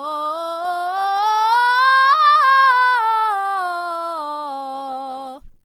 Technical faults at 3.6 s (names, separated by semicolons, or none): low bit depth without dither; Opus compression